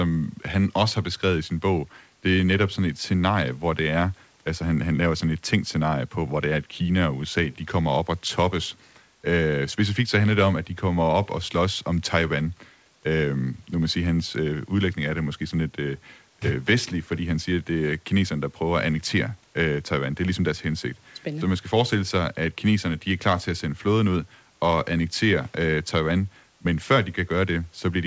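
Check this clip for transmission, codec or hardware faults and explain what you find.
No transmission, codec or hardware faults turn up in this clip.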